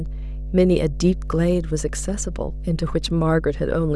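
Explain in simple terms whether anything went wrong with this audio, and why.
A steady, low buzzing tone sits under the speech from start to finish, fairly loud next to the voice. That's mains hum: electricity from the 50 Hz power supply leaked into the recording, probably through a ground loop or a nearby transformer.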